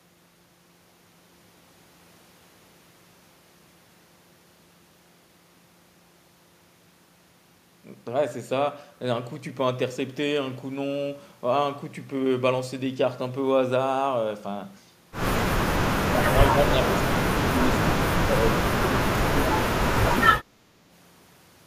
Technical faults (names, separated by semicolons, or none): speech suppressed in double talk